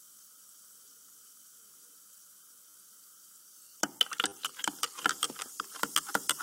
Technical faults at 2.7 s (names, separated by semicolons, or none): repeated buffer